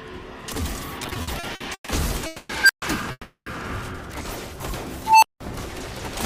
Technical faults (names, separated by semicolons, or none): repeated stalls (stutter); call audio freeze; unstable filter